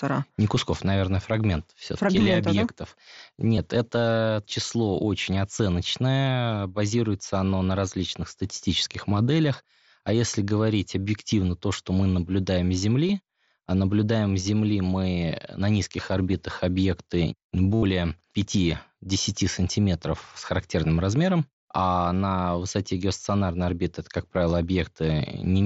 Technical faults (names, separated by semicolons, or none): concealed Bluetooth headset packet loss